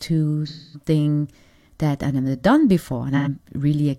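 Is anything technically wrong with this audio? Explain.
Yes. AAC frame loss with concealment at 0.47–0.88 s and 3.16–3.28 s, just after "that I've never done": the decoder rebuilt the missing frames from the preceding spectrum, leaving smeared, noisy patches of roughly 256 ms and 85 ms.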